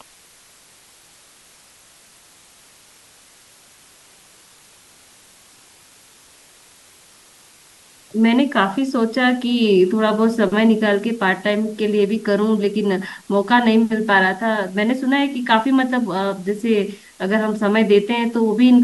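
From start to finish the speech carries low bit depth with dither: the sound sits at 8 bits, with dither added before rounding, so the error becomes a steady, even hiss about 30 dB below the speech, free of distortion. A spectrogram shows a flat noise floor across all frequencies, and the waveform never returns to true silence.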